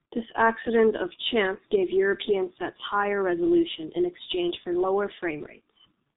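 Throughout, the speech has passed through heavily compressed G.723.1 coding, consistent with its roughly 6.3 kbit/s mode, leaving nothing above 3.8 kHz: muffled, hoarse tone with smeared consonants.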